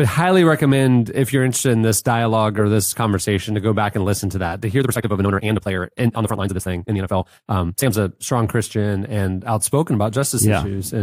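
From 4.77 s to 7.91 s the speech runs at 1.95 times its pace with unchanged pitch, a time-stretched section, likely from software squeezing audio by dropping short pieces. It sounds rushed; the spectrogram shows tighter syllable spacing but the same harmonic spacing.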